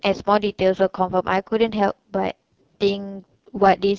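From start to finish the speech carries AMR wideband (HD Voice) codec damage, and it is heavy: the speech sounds rough and raspy, which fits the codec's lowest 6.6 kbit/s mode. The model rebuilds speech below 6.4 kHz from a coarse pulse excitation and replaces 6.4 to 7 kHz with shaped noise. On a spectrogram, harmonics look smeared and blotchy, the top strip is a uniform noise wash, and nothing appears above 7 kHz.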